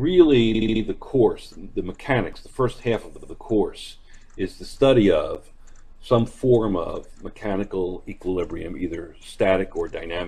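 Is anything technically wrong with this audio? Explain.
Yes, there are two kinds of fault.

Repeated frames: at 0.54 to 0.82 s and at 3.16 to 3.30 s, a 70 ms run of compressed data, which fits about three frames, was sent again to the decoder. The first repeats four extra times and the second twice, adding about 0.28 s and 0.14 s. Each is heard as a stutter.

Block of digital silence: at 2.33 s (3 ms) and 5.35 s (10 ms), the output buffer was likely left unfilled, so those samples became zeros. The signal drops to silence and returns with no fade, heard as a brief tick.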